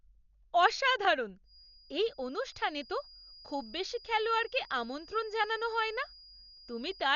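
The whole clip sounds dull and rough, likely from heavy Dolby Digital compression at a low bitrate, around 48 kbps. Nothing comes through above 6.9 kHz, and the upper band that's left has a fluttering, noisy grain where the decoder filled starved lines with dither.

From 1.43 s to the end, a thin feedback whistle at 4.9 kHz sits behind the speech, roughly 25 dB down and swelling and fading slowly in level. It's likely a speaker-to-mic loop sitting right at the edge of howling.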